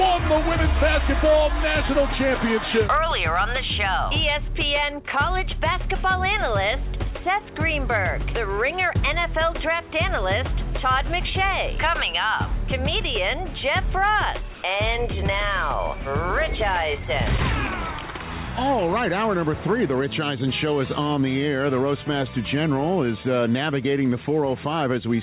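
From 14.54 to 14.63 s, comfort noise replaces the background for 90 ms, likely from discontinuous transmission. It is a flat, featureless hiss about 1 dB off in level, a smooth band below 4 kHz on the spectrogram.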